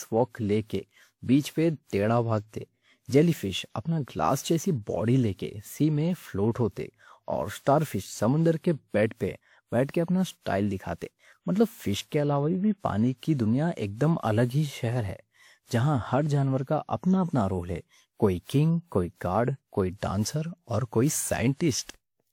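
From start to end, the speech carries a steady 100 Hz buzz from a block size mismatch (truncated). One stage writes longer blocks than the next reads, so each block's tail is discarded, and the chopping repeats at the block rate. The pace stays essentially at normal speed.

Also throughout, the speech sounds swirly, hollow and smeared, with blurred consonant attacks and no content above 20 kHz. This is likely generation loss from several rounds of lossy re-encoding, consistent with WMA at 96 kbit/s, each pass adding fresh quantisation noise.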